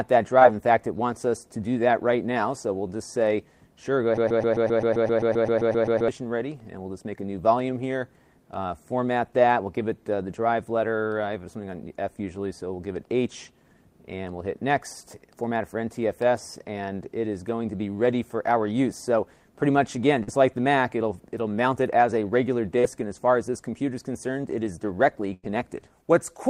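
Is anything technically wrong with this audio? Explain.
Yes, there are three kinds of network and playback fault.

Short concealed packet loss occurs at 0.39–0.43 s, 20.23–20.29 s and 22.79–22.85 s. Each time, a short stretch of the stream, 20 to 40 ms, arrived too late to decode. The receiver extrapolated from the preceding sound and then crossfaded back, which is heard as a brief smear or wobble.

A broken-record loop runs from 4.17 s to 6.08 s. A 131 ms fragment repeats back to back 15 times, most likely because the player or stream stalled and kept resending its last buffer. The material that should have played during those two seconds is gone.

A burst of packet loss at 25.33–25.45 s removes about 100 ms of audio. Concealment stretches the last sound and fades it as the gap continues, giving a held buzz or dying hiss. Playback then resumes with the intervening section skipped.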